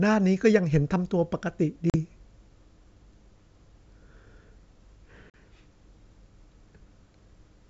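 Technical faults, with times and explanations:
1.90–1.95 s and 5.30–5.38 s, packet loss on an ADPCM call: each time about 40 ms of the speech drops out into a hard-edged silent hole, roughly a couple of packets' worth. When the sound comes back, the decoder's adaptive predictor and step size no longer match the sender's, so the speech re-enters slightly distorted, then settles within some tens of milliseconds as the G.722 decoder, which sounds clean wideband, resyncs.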